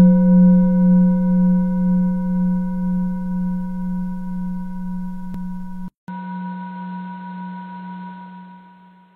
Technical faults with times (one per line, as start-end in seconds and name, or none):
5.34-5.38 overlap between stream segments
5.88-9.15 input switched to a poorer device